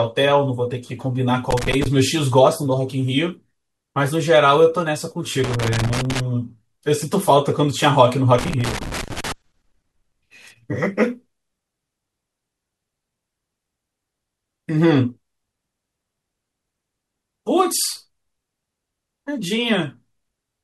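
Speech marred by loose connector crackle at 1.51–1.86, 5.44–6.20 and 8.39–9.32 s: a worn contact chops the signal, showing as ragged waveform dropouts and broadband vertical streaks.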